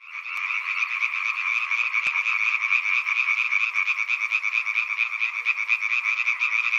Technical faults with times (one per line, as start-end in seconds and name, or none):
0.37-5.46 clock drift buffer slips